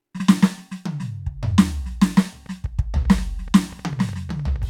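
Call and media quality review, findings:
Train of clicks over the music, 1.60 to 4.63 s: about 20 same-shaped ticks, roughly 6 per second, uneven spacing, peaking near the music's own level. Likely nearby-equipment interference or a faulty connection injecting repeated pulses.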